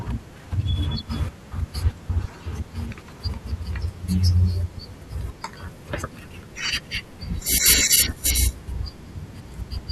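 No technical faults are audible.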